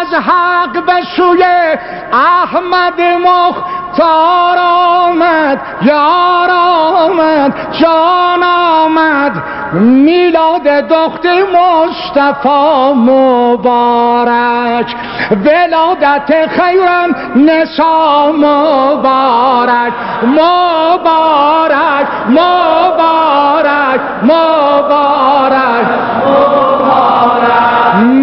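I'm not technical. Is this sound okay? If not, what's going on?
Yes, nothing in this recording points to a technical problem, so the sound is fine as it is.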